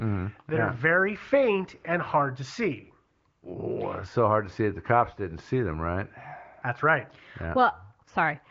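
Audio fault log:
Nothing stood out as faulty on listening to this speech clip.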